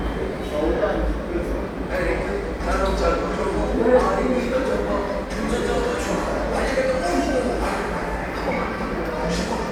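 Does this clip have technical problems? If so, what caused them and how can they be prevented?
No technical faults are audible.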